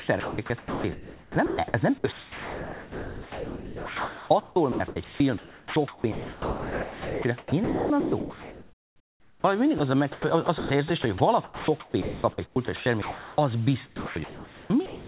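From 0.0 to 9.44 s, before "mindig az a", the sound is chopped by the voice detector, likely because it kept switching transmission off. About 7.3 s is replaced by flat comfort noise, which shows as featureless grey patches between speech harmonics on a spectrogram. At 9.78 s, just before "az a", a 20 ms piece of sound is dropped by the voice detector and likely filled with comfort noise. It is heard as a tiny gap and appears as a thin, uniform low-level slice in the waveform. Chopping, likely from the voice detector again, returns from 10.12 to 13.38 s, after "mindig az a", with about 1.5 s filled, and again from 13.86 s to the end with about 1 s filled. All of this sits within the G.711 band that stops at 4 kHz.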